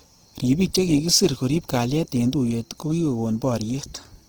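Throughout the speech, Opus compression is plainly audible: with the encoder likely starved at a rate around 16 kbps in its music mode, bands are refilled from folded or noise content, making tones rough and grainy. A spectrogram shows full-band energy to 20.4 kHz, smeared into noisy texture.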